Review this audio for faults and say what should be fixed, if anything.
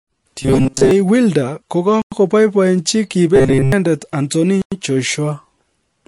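The whole clip sounds watery and swirly. That's likely MP3 compression at a low bitrate, around 48 kbps, starving the treble and weak detail. To prevent it, encode at a higher bitrate or keep a lossless master.

From 0.42 to 0.91 s and again from 3.36 to 3.72 s, the speech turns into a rigid 133 Hz buzz. That's the robotic sound from repeated short buffers: a roughly 7.5 ms slice gets looped while most of the real audio is skipped. That points to the likely cause being audio arriving too seldom. To prevent it, give the playback or capture path more buffering so it never runs dry.

At 2.02 s and 4.62 s there's a 100 ms hole, the gap between chunks that comes after each 2.5 s chunk. Nothing's lost, but each join gets a burst of silence. To prevent it, strip codec padding and queue each chunk before the previous one ends.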